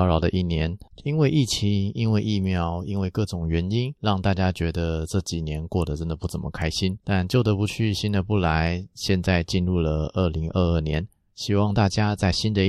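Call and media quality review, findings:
Corrupt frame decoded at 4.04 s and 10.43–10.45 s: short chirps, squeaks, blips or noise bursts in the speech, each confined to one frame. Likely cause is decoder playing bit-damaged frames; misread gains/codes misplace spectral energy. Error peaks about -30 dBFS, then about -40 dBFS.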